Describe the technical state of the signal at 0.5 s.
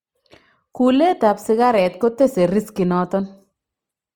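At 0.5 s the speech carries plainly audible Opus compression, and it runs through the whole clip rather than starting there. The likely cause is Opus in its music (CELT) mode at a low rate, around 24 kbps. Starved bands are filled with folded or noise-like energy, so the sound turns grainy and rough rather than swirling with the watery holes of MP3. Bandwidth stays full, with content up to about 20.2 kHz, so it is not muffled.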